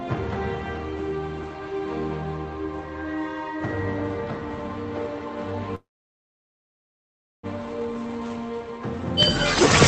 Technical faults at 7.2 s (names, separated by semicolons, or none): call audio freeze